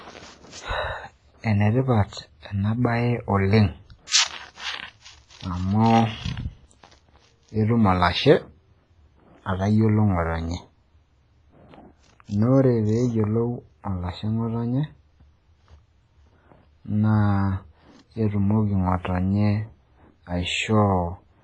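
From start to finish the speech carries heavy transform-codec damage, likely WMA compression at a low bitrate around 24 kbps. It sounds washy and ringing, with hiss breathing under each phrase. A spectrogram shows nothing above 10.6 kHz and patchy, zeroed holes between harmonics.

At 4.07 to 4.12 s, pre-echo smears a sharp attack. Quantisation noise sized for the loud onset spills about 48 ms ahead of it, heard as a brief hiss before a softened attack. The waveform shows noise where silence should be.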